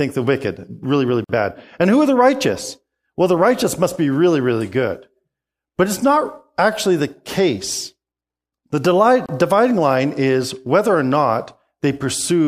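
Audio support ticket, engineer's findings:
Gap at a join of encoded pieces, 1.24–1.29 s: 50 ms dropout right after "the wicked really really", edges smeared, speech resumes mid-flow. Second gap at 9.26–9.29 s: 29 ms gap just before "line is whether or". Probable component: segment concatenation. Mechanism: pieces encoded separately, joined without trimming, so encoder start delay and last-frame padding remain as silence.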